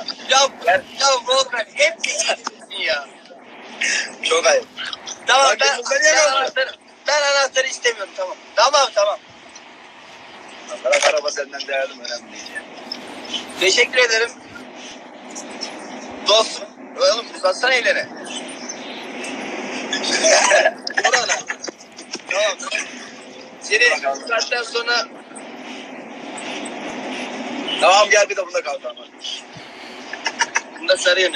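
At 2.93, 8.92, 14.92, 20.91 and 26.90 s, tiny skips of about 7 ms, evenly spaced every 6 s, are likely audio missing between chunks: joined seamlessly, unlike random dropouts.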